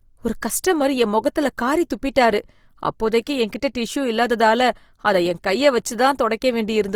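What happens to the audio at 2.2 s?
At 2.2 s the speech carries Opus compression, which runs through the whole clip. Its grainy, rough texture likely comes from the music mode at a rate that fits about 24 kbps. Starved bands are filled with folded or noise content. The full band to about 20.4 kHz stays.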